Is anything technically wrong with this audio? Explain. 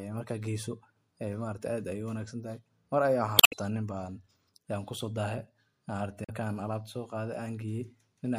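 Yes. Damaged data in a compressed stream breaks the speech at 3.36 to 3.53 s and again at 6.23 to 6.30 s. Corrupt bytes make the decoder misread frames and lose sync, producing a chirp, squawk, click or short hole. Spectrograms show a brief disruption; waveforms show an abrupt discontinuity.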